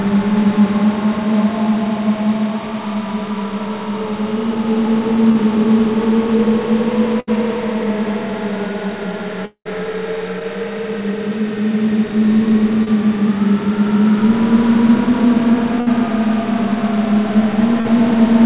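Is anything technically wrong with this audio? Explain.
Yes. The sound passed through a narrowband telephone-style call path, with nothing above 4 kHz, and it shows three kinds of network fault.

Short concealed packet loss occurs at 5.32, 10.39, 12.84 and 17.80 s. Each time, 20 to 40 ms of audio arrived too late. The receiver extended the preceding sound to cover the hole. The result is a brief smear or wobble, and a short transient may disappear.

A burst of packet loss occurs at 7.20 s, about 80 ms, and at 15.80 s, about 60 ms. Several packets in a row went missing. The receiver stretched the last sound and faded it down. You hear a held buzz or dying hiss, then a jump forward.

A long network dropout runs from 9.45 to 9.67 s and is likely the cause of that gap. About 200 ms is missing. A fading continuation of the previous sound fills it, and the final 80 ms or so are silent before the audio resumes further on.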